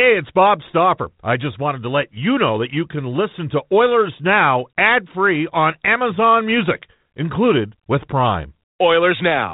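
There are no technical faults to describe in time order in this speech clip, which comes through the G.726 ADPCM path at 32 kbit/s working as intended.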